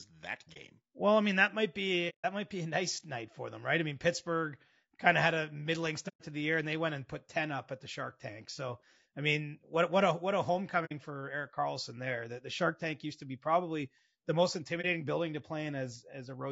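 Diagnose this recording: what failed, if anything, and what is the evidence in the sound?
The speech is rough and grainy throughout. Noise fills the gaps between pitch harmonics, and the top band sounds thin and synthetic. This points to the codec stage, most likely low-delay AAC compression (AAC-ELD). Its short frames resolve harmonics poorly, so each frame needs more bits than a normal codec would. The degree of damage fits a bitrate of around 32 kbps. At that rate the encoder cannot hold fine harmonic detail.

There are five soft-edged dropouts. They fall at 0.53–0.57 s, at 2.09–2.25 s between "I mean that might" and "might be a nice", at 6.08–6.21 s between "of had a middling" and "to the year and", at 10.85–10.92 s, and at 14.81–14.85 s between "be probably the most" and "building". This is AAC frame loss with muting, a network or transport failure. The decoder zeroed the missing spectra, and the overlapping windows faded each hole in and out.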